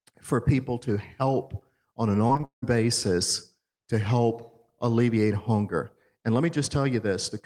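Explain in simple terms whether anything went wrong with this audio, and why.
Repeated packet loss (robotic sound) at 2.27 to 2.64 s: five chunks of speech went missing, and each was patched by extending the sound before it, so it turns choppy.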